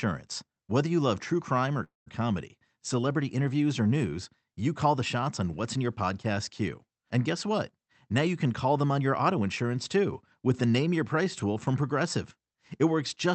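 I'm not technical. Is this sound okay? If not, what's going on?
No. At 1.83 to 2.08 s, just after "love true crime or", there is a call audio freeze: a brief fading buzz then silence, likely from delayed network data, before "comedy celebrity interviews or" resumes intact. From 8.99 to 9.47 s, after "can call them on", a jitter buffer speed-up trims tiny slices, roughly a twentieth of a second in total, so speech runs 8% faster at unchanged pitch.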